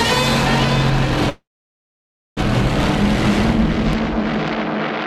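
From 1.29 s to 2.39 s there is a call audio freeze: the last sound carries on briefly as a fading buzz, then about 0.95 s of silence before the audio picks up exactly where it left off. The likely cause is packets held up in transit until the jitter buffer ran dry. Unlike a dropout, nothing is cut out. About 1.07 s is inserted, so everything afterwards runs that much later.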